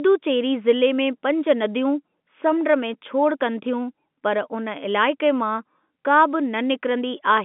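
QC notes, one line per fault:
No faults detected.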